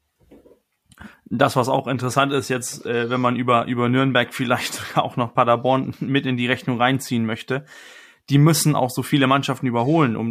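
A speech recording, with nothing technically wrong with it.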